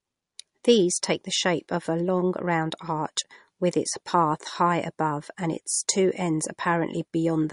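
MP3 compression throughout: a starved bitrate, which fits about 42 kbps, is the likely cause of the treble cut at 10.6 kHz and the plainly audible watery swirl.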